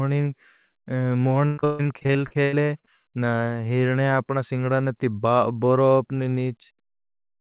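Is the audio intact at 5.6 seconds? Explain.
Yes, the speech is intact at 5.6 seconds: nothing breaks up or drops out there, and what you hear is simply the narrowband sound of a G.711 call path, which carries nothing above 4 kHz.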